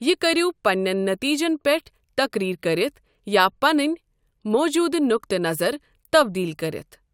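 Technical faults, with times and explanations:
No technical faults can be heard in this speech recording. There is nothing here that calls for a time or an explanation.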